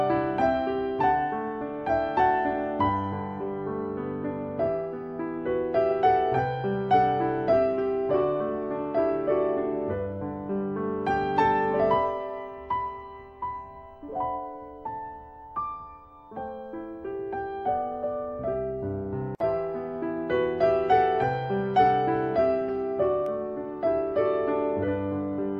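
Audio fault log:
23.26 s, block of digital silence: a single sharp tick, too brief to hear as a gap. For about 0.33 ms the signal drops out and then returns, which fits a block of roughly 16 samples that never reached the output in time or was zeroed after an invalid calculation. Because the sound cuts off and resumes with no fade, both edges are abrupt steps in the waveform. Packed this close together, they merge into one click.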